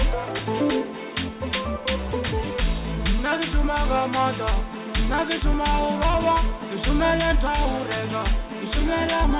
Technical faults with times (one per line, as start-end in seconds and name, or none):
none